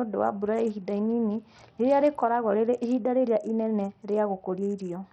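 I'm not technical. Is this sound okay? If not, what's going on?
No. Throughout the speech, the treble flickers and drops out under a gritty haze, likely from heavy Bluetooth SBC compression starving the upper frequency bands of data.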